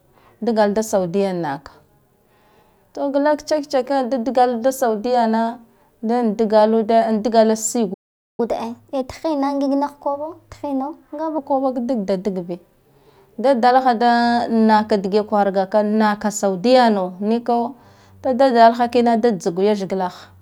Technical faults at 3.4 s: none

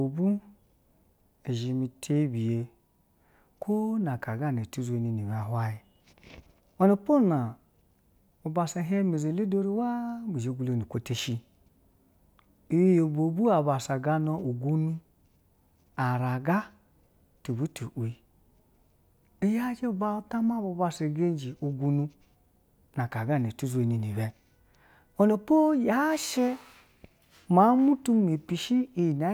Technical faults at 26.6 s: none

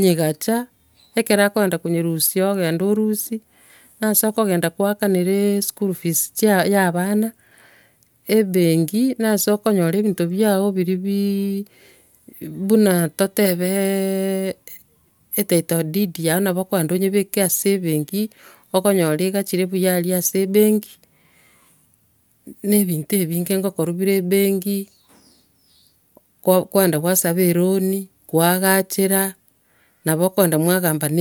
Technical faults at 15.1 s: none

